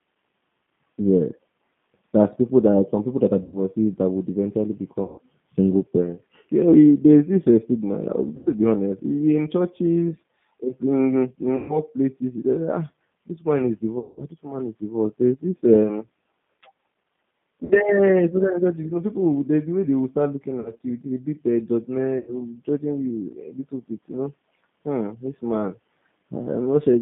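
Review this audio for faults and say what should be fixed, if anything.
The whole clip carries the G.729 codec's sound. Everything is confined to about 150 Hz to 3.5 kHz. The speech is thin, rough and slightly synthetic, because it is rebuilt at 8 kbit/s from a filter, a pitch predictor and a few pulses. Use a wideband codec such as G.722 or Opus instead.

VoIP packet loss concealed by the speech codec occurs at 3.43, 5.03, 8.37, 11.57, 13.99, 17.65, 20.60 and 22.18 s. Each gap is filled with a smeared, fading stretch of sound lasting 60 to 180 ms. The worst is at 13.99 s. The voice stays weak briefly after each one. Improve network reliability and add a jitter buffer or forward error correction.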